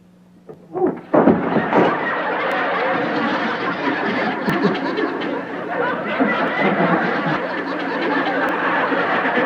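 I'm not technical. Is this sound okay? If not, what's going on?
No. There are five tiny clicks or skips, at 0.54, 2.52, 4.50, 6.48 and 8.49 seconds, roughly every 2 seconds. This is an overlap between stream segments: the audio arrives in 2-second pieces, and where two pieces were marked as overlapping, the player threw away a few milliseconds of real sound. Unlike a dropout, no silence is added; the sound jumps ahead, and the steady two-second rhythm sets it apart from random glitches.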